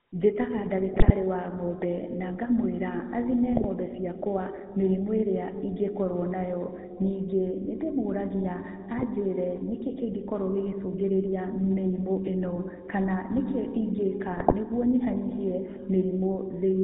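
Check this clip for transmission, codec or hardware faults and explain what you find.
The speech is carried over a GSM full-rate link, and there are four short bursts of corrupted decoding.

GSM full-rate codec, throughout: the voice is rebuilt from a vocal-tract filter driven by a thinned, regularly spaced pulse excitation at 13 kbps, with nothing above 4 kHz. The result is a plainly audible buzzy, gravelly roughness and a dull, band-limited top.

GSM bit errors, at 0.94–1.11 s (just before "wa ng'ombe na ngamũĩra"), 3.52–3.65 s (between "ng'ombe na ngamũĩra athime" and "ciakwa mĩrimũ ĩrĩa ingĩkorwo"), 8.98–9.04 s, and 14.34–14.54 s (between "ĩno kana nĩkĩ ingĩka" and "nĩguo nyihanyihie"): flipped bits corrupt the filter, pitch and gain values, so the speech briefly squawks, pops and gargles.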